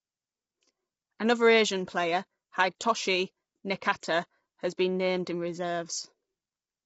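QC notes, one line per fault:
Throughout: low-delay AAC compression. The speech was likely squeezed through a low-delay AAC coder such as AAC-ELD, whose short frames cannot separate closely spaced harmonics well. At a rate that fits about 24 kbps, too few bits remain, so the voice turns rough and grainy, with noise filling the gaps between harmonics. Nothing is present above 7.8 kHz, leaving the top end dull and missing its air. The damage is plainly audible.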